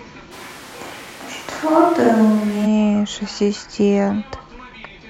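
A switch to a distant microphone runs from 0.33 to 2.64 s. The speech abruptly turns roomy, hollow and thin in the bass, with room noise rising to roughly 20 dB below it while the speech level stays about the same. The close microphone likely dropped out, leaving a farther pickup.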